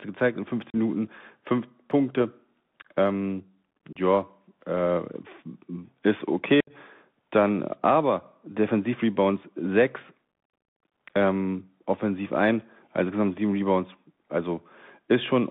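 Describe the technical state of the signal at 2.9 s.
At 2.9 s, as throughout, the speech carries Bluetooth CVSD headset codec damage. The narrowband link confines it to 150 Hz–3.6 kHz, and its one-bit adaptive-step coding adds granular hiss and scratchy s sounds that plain telephone band-limiting lacks.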